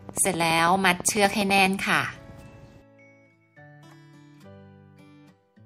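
A train of clicks runs through the audio from 0.09 s to 1.67 s: around twenty near-identical sharp ticks at a steady 12.1 per second, standing out a few decibels above the sound. Because the clicks share one shape and keep an even pace, they are not random crackle or scattered dropouts, and the rate is too slow to fuse into a buzz. The likely cause is interference from nearby equipment or a faulty connection or power supply.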